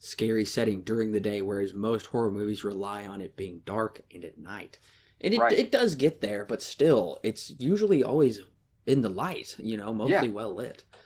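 Throughout the speech, Opus voice compression is plainly audible. The hybrid coder's sparse excitation leaves a hoarse, faintly robotic edge, which fits roughly 16 kbps. Unlike a simple low-pass, the top end stays present, and there is no MP3-style swirling.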